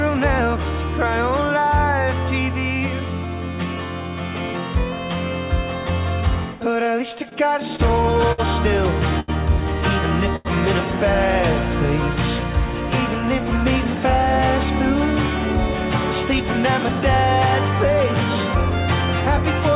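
Packets reached the jitter buffer late and slowly between 6.84 and 8.40 s, so it ran dry eight times. This produced repeated stalls (stutter): the last sound is held for gaps of up to 59 ms, so the audio drags and stumbles without losing anything. Two single late packets then caused a short stall from a late packet each, at 9.20–9.30 s and 10.36–10.47 s. For about 80 to 90 ms the sound is stretched with a faint buzz or dip before it resumes where it left off. All of this sits on a call path whose band stops at 4 kHz, which fits a 64 kbps G.711 mu-law codec.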